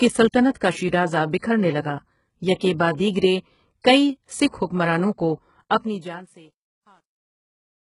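Throughout, the treble is rebuilt rather than real, gritty and metallic, with nothing above 11.1 kHz. This is likely heavy HE-AAC compression, pointing to roughly 12 kbps. From 5.64 s the closing fade shows truncation distortion. Too few bits, perhaps 11, turn the waveform into steps. It grows gritty, worst from 6.32 s to the end.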